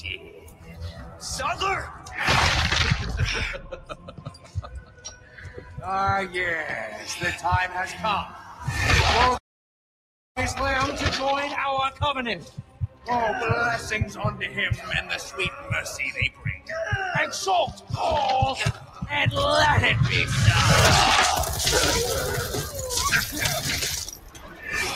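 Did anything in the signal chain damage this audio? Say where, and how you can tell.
Yes. Throughout, the sound pumps and thins: held tones and decaying tails sink while attacks punch through, a level swing of around 10 dB. This is call processing. A noise suppressor tuned for speech is left engaged, treating sustained content and ambience as noise to attenuate.

The same suppressor cuts specific passages harder, by about 9 to 14 dB, at 0.0–2.15, 3.58–5.85, 7.95–8.67, 11.91–13.08, 14.08–16.69, 17.71–19.06 and 22.65–24.69 s. Sustained and fading material collapses or is truncated there, as the gain estimator misreads it as background noise.

At 9.37 s the audio stops mid-flow and stays silent for about 0.98 s, resuming at 10.37 s. This is a playback stall at the buffer or driver stage, most likely a player starved of data or a blocked output thread.

From 10.37 to 13.37 s the sound hurries at normal pitch, running about 1.25 times speed. 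This is time-compressed catch-up: after the stall, the player shortens its backlog by removing small slices and cross-fading the joins.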